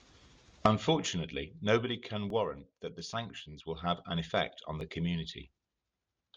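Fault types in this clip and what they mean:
Overlapping chunks: The speech is split into 2.5 s chunks, each starting 7 ms early. That sliver replays at each join, causing brief clicks at 2.30 s and 4.81 s.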